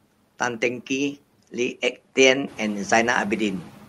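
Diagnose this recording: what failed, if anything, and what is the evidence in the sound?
The failure is in call processing: noise suppressor artifacts run through the whole speech clip. Between phrases the background drops by about 11 dB, then comes back up underneath the speech, so the noise floor pumps with the talker. The suppressor estimates the steady noise and attenuates those bands frame by frame, opening up when speech arrives. The room noise itself jumps by about 11 dB around two and a half seconds and stays about 19 dB under the speech.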